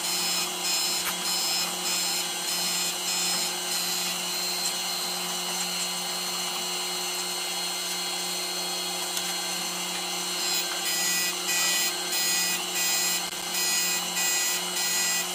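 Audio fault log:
0.98–1.09 s and 13.26–13.46 s, loose connector crackle. Brief irregular scratchy bursts chop the audio. A worn contact is making and breaking as it moves.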